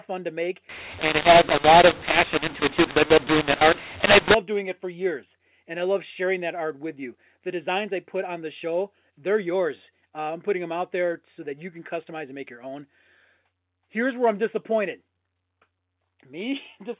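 From 0.69 to 4.34 s, the A-law coded speech is decoded as mu-law, a case of mu-law and A-law mixed up. The two logarithmic scales place their steps differently, so each 8-bit code maps to the wrong amplitude. Some levels swell, others shrink, and the quietest samples jump well above silence. The speech turns harsh and distorted, and the gaps between sounds fill with noise. Afterwards the ordinary 4 kHz-limited telephone sound returns.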